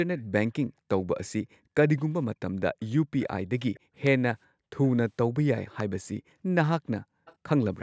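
Faint delayed copies of the speech, about 30 to 35 dB down and trailing by roughly 480 ms, surface at 0.17, 2.81, 3.74, 4.82 and 7.25 s. This is likely echo leak, where the far end's canceller let loudspeaker pickup return. At 1.48–1.74 s and 3.80–3.91 s the room background drops by about 35 and 40 dB. This is background gated by the echo canceller, which clamps the microphone during playback.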